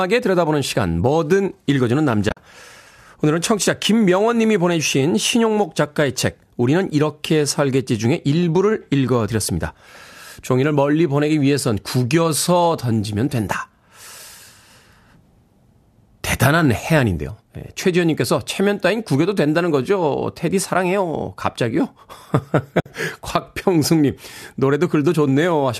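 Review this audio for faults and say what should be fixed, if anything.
AAC frame loss with muting: the decoder lost frames and zeroed them, fading the speech into soft holes at 2.29–2.37 s (about 50 ms longest) and 22.80–22.86 s (60 ms). Forward error correction or retransmission on the link would keep those frames from being lost.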